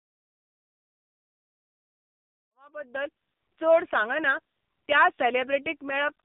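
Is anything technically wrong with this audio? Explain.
Yes. Throughout the speech the AMR narrowband mobile codec is audible. Nothing survives above 4 kHz, and the voice is heavily damaged: buzzy, thin and synthetic, as when a codec rebuilds speech from a vocal-tract model and a few excitation pulses per 5 ms subframe, with very few bits to spend. The coarseness fits AMR-NB's 6.7 kbps mode. A simple telephone band-limit would be just as muffled but would keep the voice natural. Here the synthetic, buzzy texture marks codec modelling. The fade-in ending at 3.52 s, starting around two and a half seconds, is smooth, with no click or hard edge.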